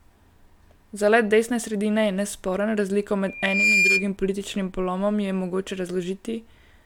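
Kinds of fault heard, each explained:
Loudspeaker feedback squeal: 3.27 to 4.11 s, the microphone re-amplifies its own loudspeaker at 2.4 kHz, a tone swelling within half a second to just above the speech.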